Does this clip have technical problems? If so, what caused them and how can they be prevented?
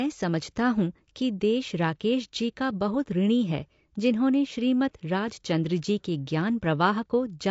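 Yes. Low-delay AAC compression runs through the whole speech clip: the voice sounds rough and grainy, with a noisy fill between the pitch harmonics and a thin, somewhat synthetic top band. This is likely AAC-ELD, the video-call codec, whose short frames of about 10 ms resolve harmonics poorly, and the plainly audible damage fits a bitrate around 32 kbps. To prevent it, give the low-delay codec more bitrate or use a higher-resolution codec when latency allows.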